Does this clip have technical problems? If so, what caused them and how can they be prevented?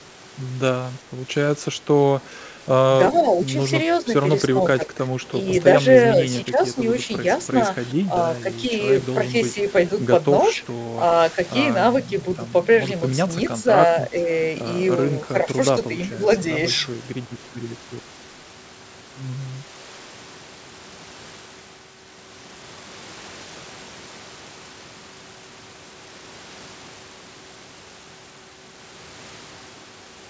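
Yes. The first problem is speech suppressed in double talk. At 3.17–4.06, 4.6–5.14, 6.14–6.76 and 7.94–8.71 s the speech dips by about 5 dB, and at 13.63–14.27 and 15.33–16.19 s it dips by about 10 dB. Each dip is short, covering no more than a few hundred milliseconds within each stretch. This is likely the echo canceller hearing both ends talking at once, failing to tell the near talker from the loudspeaker echo, and pulling everything down. To prevent it, use a headset or a better-tuned echo canceller with proper double-talk detection so the near speech isn't squashed.

There's also a brief echo leak at 10.55–10.66 s. A faint copy of the voice comes back roughly 0.38 s late, sitting around 35 dB below the speech, so it's a quiet scrap rather than an obvious repeat. It's likely the far end playing through a loudspeaker, where its canceller didn't fully remove what the microphone caught and sent that residue back. 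The fix is to have the far side use headphones, or to let their echo canceller converge properly with a sensible speaker volume. The audio tops out around 8 kHz, which fits a G.722 call path and isn't a fault.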